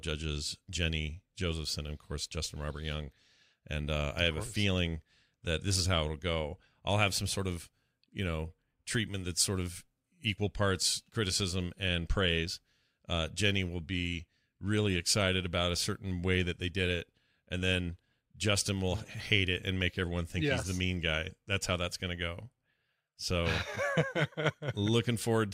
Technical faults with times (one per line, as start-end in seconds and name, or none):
none